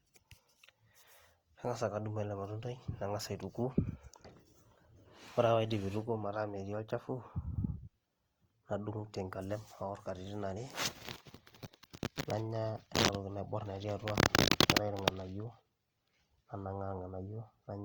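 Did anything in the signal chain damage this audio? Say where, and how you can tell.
Yes, at the codec stage, throughout the speech. The sound is grainy and rough, with bands filled by noise-like filler rather than swirling gaps, which separates this from MP3. Full bandwidth survives, which fits Opus compression in its music mode at likely around 24 kbps, spending too few bits per band.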